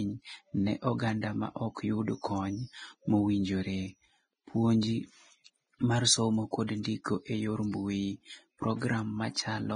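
From start to finish, the speech has the hissy, grainy texture of heavy compression, likely Vorbis compression at a low setting. Nothing is present above 9.7 kHz. The treble below that cut-off is quantised so coarsely that its fine detail turns into a rough noise of similar energy. Tonal parts of the speech sound roughened. The degree of damage fits a bitrate around 21 kbps.

Three short pre-echoes follow: 6.67 to 6.69 s, then 6.83 s and 7.04 s. Each lasts about 20 ms. A sharp onset lands late in a transform block. The codec's quantisation noise, sized for the loud onset, spreads across the whole block. It therefore fills the quiet gap just before the attack. Each attack is heard as a brief hiss leading into a softened, smeared start.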